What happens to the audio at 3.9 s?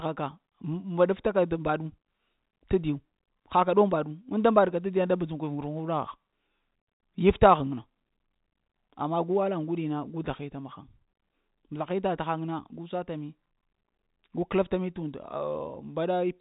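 Nothing goes wrong at 3.9 s; the speech carries straight through that moment on its narrow telephone-band G.711 coding.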